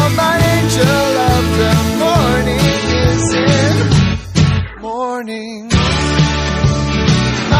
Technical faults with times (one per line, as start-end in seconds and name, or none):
2.66-7.59 adaptive stream at a lower bitrate